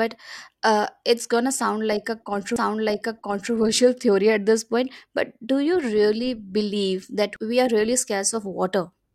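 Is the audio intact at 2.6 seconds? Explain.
No, a CD skip hits at 2.56 s, just after "but uh it's gonna". The laser jumped to another turn of the disc's spiral, so playback mutes for a split instant, giving a tick, then resumes from a different point in the speech.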